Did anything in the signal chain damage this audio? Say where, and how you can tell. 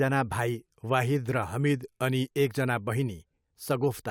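No, nothing in the signal chain damaged this audio.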